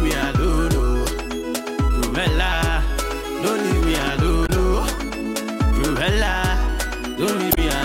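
At 4.43 to 4.50 s, and again at 7.49 to 7.58 s, short bursts of damaged data in a compressed stream break through as brief squawks or blips, roughly 70 and 90 ms long. Corrupted bytes left the decoder misreading frames until it resynchronised on a later header. On a spectrogram each shows as a narrow, blocky broadband patch unrelated to the surrounding content. The waveform shows an abrupt, ragged discontinuity at each edge.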